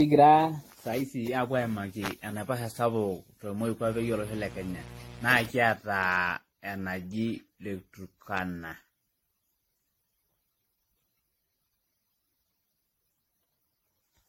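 Throughout the speech, the sound is swirly, smeared and hollow, with blurred attacks, likely generation loss from re-encoding around seven times with AAC at 64 kbit/s; a spectrogram shows patchy holes and nothing above 16.6 kHz.

From 3.85 to 5.51 s, a steady raspy mains buzz sits about 15 dB below the speech, appearing on a spectrogram as evenly spaced 60 Hz harmonic lines reaching several kHz.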